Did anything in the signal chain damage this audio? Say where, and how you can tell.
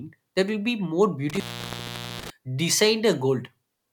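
Yes, in the analogue wiring: an intermittent contact opens the line from about 1.29 to 2.30 s, dropping the speech for roughly 0.80 s with crackle at each edge. On a spectrogram, broadband vertical clicks bracket a nearly empty band of faint hiss, where the waveform collapses to almost flat.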